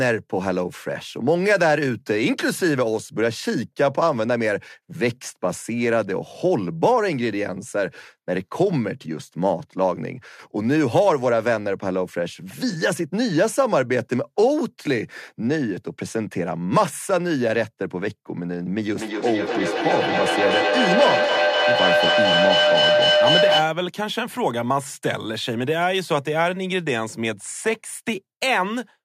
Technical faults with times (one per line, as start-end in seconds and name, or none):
18.96-23.82 feedback howl